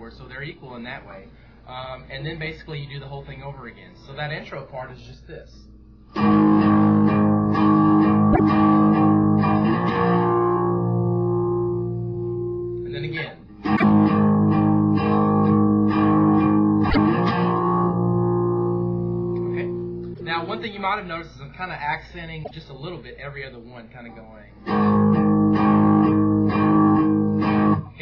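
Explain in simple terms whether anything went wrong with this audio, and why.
Damaged data in a compressed stream causes brief blips at 8.30, 13.73, 16.86, 20.10 and 22.40 seconds, each about a tenth of a second long. Corrupted bytes confuse the decoder, which loses its place and skips ahead to the next readable chunk.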